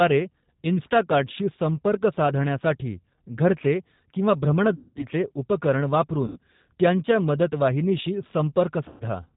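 From the first second to the last, the speech has a slightly rough, synthetic edge, with nothing audible above 4 kHz. That is the G.729 codec at work, most likely the 8 kbit/s G.729A variant. It throws away the waveform and rebuilds each 10 ms frame from a vocal tract filter, a pitch predictor and a handful of pulses, so the damage is plainly audible.

At 4.75 to 5.06 s the sound smears into a stretched sound that sags in level before normal speech resumes, and it stays thin and distorted for a moment afterwards. The same VoIP packet loss concealed by the speech codec returns at 6.27 to 6.39 s and again at 8.88 to 9.04 s. Each time, the decoder lost about 210 ms, 90 ms and 120 ms of audio, gaps consistent with 30 ms packets going missing. It filled them by repeating its last pitch and filter settings at falling gain. Because each frame builds on the one before, the recovery is slow rather than a clean switch back.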